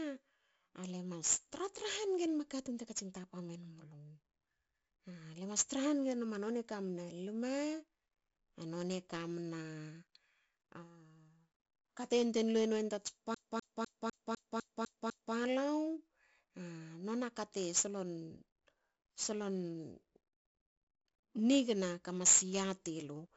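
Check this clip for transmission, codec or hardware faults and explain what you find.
Two faults are present: low-bit-rate ADPCM coding across the whole recording, and a CD-style skip in the middle.

4-bit ADPCM compression, throughout: each sample is coded as a coarse 4-bit step from a predicted value, which fits about 64 kbps. The quantisation error rides on the speech as gritty hiss that swells with loudness, attacks crunch, and nothing remains above 7.7 kHz.

CD stuck on one turn, 13.34 to 15.35 s: the laser jumps back one track at the same spot each revolution, replaying a 0.25 s fragment eight times. Each jump leaves a brief mute, producing a fast, even, mechanical stutter.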